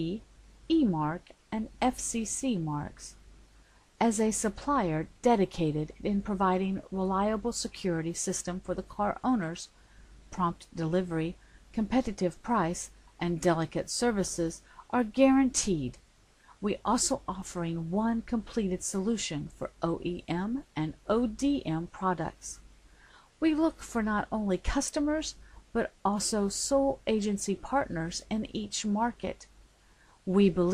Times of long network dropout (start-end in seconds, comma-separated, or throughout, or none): none